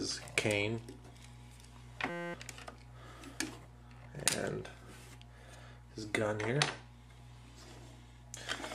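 From 2.10 to 2.34 s the audio collapses into a steady 172 Hz buzz. This is a system hang loop: the host froze while the hardware replayed one 5.8 ms chunk 42 times, which fits a 256-sample buffer, and roughly a fifth of a second was lost.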